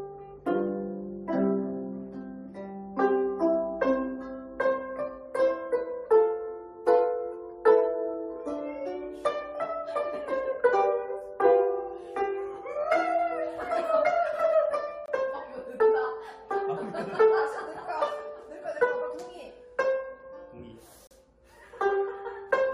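At 15.06 s the sound drops out for about 22 ms, and at 21.07 s it does again for about 37 ms. Both are a gap between stream segments: the timestamps of neighbouring segments don't quite meet, so the player pads the hole with silence. You hear a brief, hard-edged dropout rather than a fade. The two are six seconds apart, which fits six-second segments, and nothing is actually missing, just time inserted.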